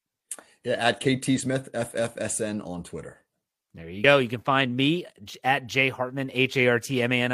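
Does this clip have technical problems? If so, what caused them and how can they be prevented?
Yes. The speech jumps forward twice, at 1.35 to 1.41 s and again at 4.00 to 4.05 s. These are compressed frames skipped: a single frame of roughly 50 ms, consistent with a 46.4 ms frame, was missing or rejected as damaged by the decoder, so playback leapt ahead. Checking file integrity and using reliable transfer or storage prevents it.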